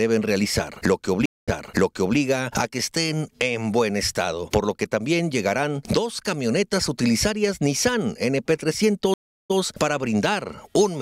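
Stream reconnects at 1.26 s and 9.14 s break the connection, leaving flat, blank gaps of 0.22 s and 0.36 s. A fresh decoder then replays sound from 0.7 s and 0.09 s earlier.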